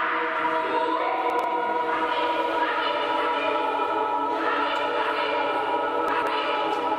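Two brief jumbled moments, at 1.30 to 1.44 s and 6.08 to 6.27 s, are chunks out of order. A block of about 46 ms of audio plays two, then three, blocks late, leaving hard joins. The block size fits a 2048-sample buffer at 44.1 kHz.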